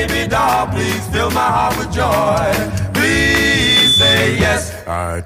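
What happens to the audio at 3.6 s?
At 3.6 s the audio is caught in a loudspeaker feedback squeal that runs from 3.43 to 4.27 s. The microphone is hearing its own loudspeaker, and at 3.5 kHz the loop gain tops one, so that tone feeds on itself, swelling over roughly a third of a second into a squeal about 5 dB above the rest of the sound. A spectrogram shows a bright horizontal line at 3.5 kHz, and the waveform swells into a dense, even envelope.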